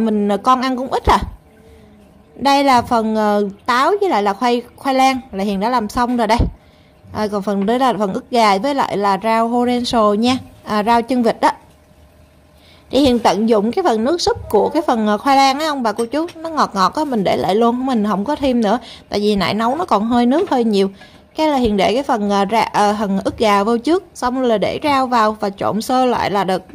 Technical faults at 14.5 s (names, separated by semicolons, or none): electrical switching spike